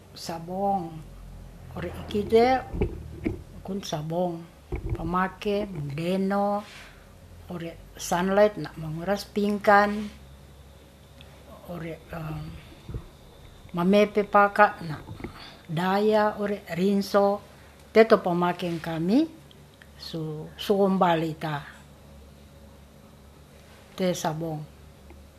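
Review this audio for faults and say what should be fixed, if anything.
No faults were heard; nothing needs fixing.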